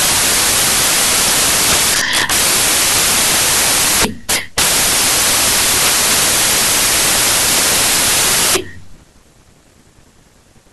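From start to finish, the samples are built from the wrong bytes: each value is assembled from misordered or misaligned bytes, so the rapidly changing low bits dominate. The result is loud, harsh broadband noise, close to white on loud sounds.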